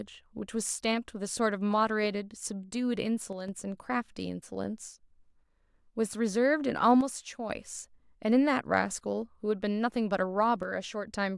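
A speech clip in which the level drops abruptly by about 6 dB three times: 3.33 to 3.48 s, 7.01 to 7.50 s and 10.63 to 11.08 s. This is most likely one channel drops out, where one stereo channel is lost briefly and the mono sum keeps only half of the shared signal. On a waveform, each event shows as a sudden rectangular step down in amplitude; a spectrogram shows an evenly dimmer band across all frequencies with sharp vertical edges.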